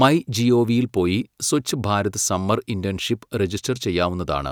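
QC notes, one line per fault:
No faults heard in this speech clip.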